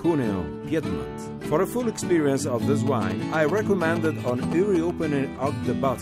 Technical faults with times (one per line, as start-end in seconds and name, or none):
2.87-4.90 GSM signalling bursts